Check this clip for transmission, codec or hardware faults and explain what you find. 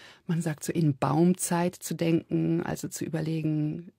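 One transmission fault is present in this speech clip. From 2.71 to 2.74 s, just after "zu denken", there is an overlap between stream segments. The segment timestamps collide, the player trims about 38 ms of genuine audio, and the waveform jumps, heard as a brief skip.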